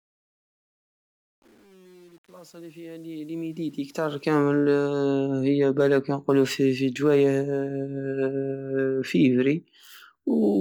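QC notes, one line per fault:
0.0–4.4 s, truncation distortion on the fade-in: the fade stage keeps too few bits, which fits about 8-bit resolution, with no dither, so the quiet start collapses into coarse square steps. It sounds gritty, worst from 0.0 to 3.75 s.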